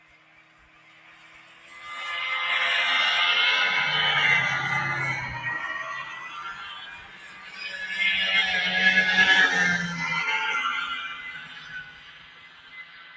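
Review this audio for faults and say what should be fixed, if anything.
The big one is a noise suppressor applied to music or sounds, and it's on the whole way through. A suppressor tuned for speech keeps treating the steadier, longer parts of the sound as background noise and pulling them down, so the level swings by around 15 dB as it grabs and releases. You hear that as pumping and a thinned-out body, with sharp onsets surviving better than anything held or decaying. The band also stops at 8 kHz, which is just the call microphone processing doing its normal thing. To prevent it, switch the suppressor off or into a music or original-sound mode whenever non-speech audio goes through the call.

On top of that there are three stretches of sound cut by the noise suppressor: 0.0 to 1.85 s, 6.04 to 7.61 s, and 11.08 to the very end at 13.16 s. In each one the suppressor decided the sustained material was noise and dug in hardest, dropping it by about 10 to 11 dB at the deepest point. 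The tails sag and fade early instead of ringing out naturally, while any sudden hits poke through. Preventing it comes down to the same fix: bypass speech-oriented suppression for this kind of material so held and decaying sounds aren't mistaken for noise.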